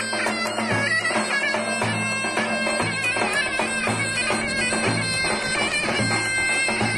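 Brief smeared blips at 0.30, 2.81, 4.21 and 6.48 s mark jumps forward in the sound, each losing roughly a tenth of a second or so, about 0.15 s at 2.81 s, nearer a third at 6.48 s. These are compressed frames skipped: whole frames went unplayed, and overlapping neighbours soften each join.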